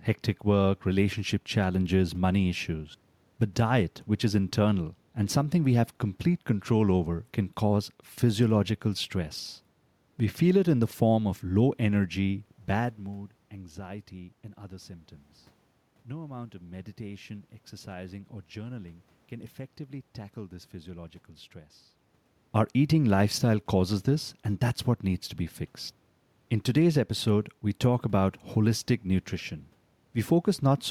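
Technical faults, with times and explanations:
Nothing stood out on listening to the recording.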